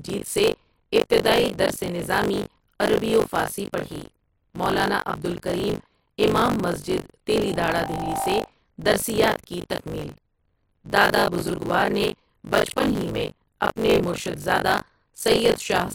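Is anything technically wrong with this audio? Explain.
Yes. Buffer tearing runs through the whole speech clip: a robotic buzz at 50 Hz, present only while there is signal. The writing program and the hardware reading the ring buffer have drifted out of step, so they cross inside every period. Roughly a third of each buffer replays audio from about 40 ms earlier, with hard joins at both edges. That repeating splice at the buffer rate is what produces the rattle.

A loudspeaker feedback squeal runs from 7.45 s to 8.49 s, beginning after "عبد الکریم امام مسجد" and ending before "درسیات کی تکمیل". A microphone is picking up the loudspeaker it feeds, and at 784 Hz the loop gain exceeds one. That single tone grows by itself over roughly 0.7 s until it sits at about the same level as the speech.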